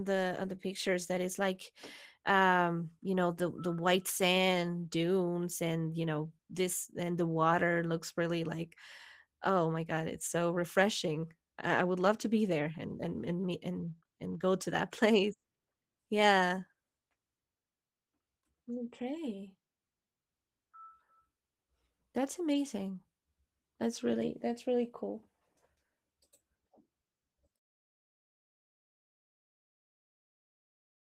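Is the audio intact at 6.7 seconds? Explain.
No, the speech sounds hoarse and slightly robotic there and throughout, from Opus voice compression: a hybrid linear-prediction coder coarsely quantising the excitation, which fits roughly 16 kbps.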